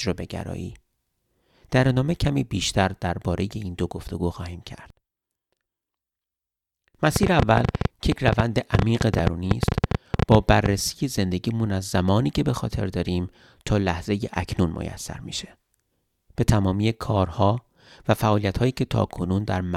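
From 7.16 s to 10.67 s a train of clicks runs over the speech: around forty similar pulses at 10 per second, unevenly spaced, well above the speech level and audible in pauses. The likely cause is electrical interference or a faulty connection or power supply.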